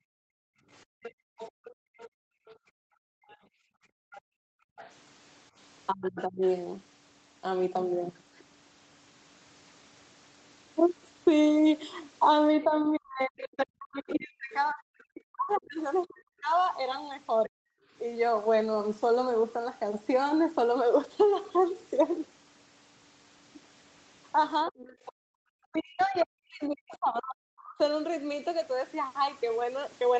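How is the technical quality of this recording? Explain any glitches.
The recording is marred by echo-canceller trouble across the call, with three kinds of fault recurring over the call, all heard within a band that stops at 8 kHz from the Opus call path.

Background gated by the echo canceller, from 0.00 to 4.77 s, again at 17.88–17.92 s and at 25.12–25.44 s. While the far end played through the loudspeaker, the canceller clamped the microphone hard to keep echo out. The room tone sinks by about 40 dB for most of the opening span and in the later dip, then returns, while the brief 17.88 s dip is shallow, only about 7 dB.

Other side's voice leaking through, at 1.03–6.48 s, 12.63–16.04 s and 24.66–27.84 s. A second voice sits faintly under the main talker, roughly 20 dB down in the first stretch and around 25 dB down in the later two. This is likely loudspeaker sound that the echo canceller failed to subtract fully from the microphone signal, so residual far-end audio rides along with the near-end speech.

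Speech suppressed in double talk, at 5.92–6.42 s, 12.64–17.6 s and 24.66–27.79 s. The main voice drops away sharply, by roughly 35 to 40 dB at its deepest, across these spans, which overlap the leaking second voice. The likely cause is both parties speaking at once: the canceller could not tell its own talker from the echo and turned everything down together, eating into the near-end speech.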